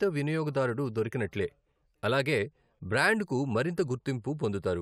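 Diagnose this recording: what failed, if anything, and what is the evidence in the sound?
Nothing failed here that I can hear; the speech comes through without anything in the sound pointing to a problem at any stage of the chain.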